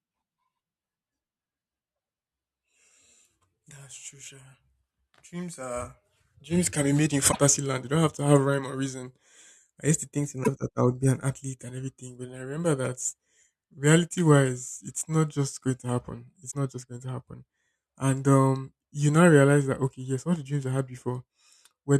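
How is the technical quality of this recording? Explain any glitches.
Three short glitches break up the speech, at 7.31 to 7.36 s, 10.43 to 10.48 s and 16.50 to 16.55 s. Each is a brief glitch lasting about 50 ms, roughly two MP3 frames, with spacing that fits 24 ms frames. The likely cause is a broken MP3 bit reservoir. After frames went missing, the next frames read their borrowed bits from the wrong data, so the speech skips forward behind a few corrupted frames.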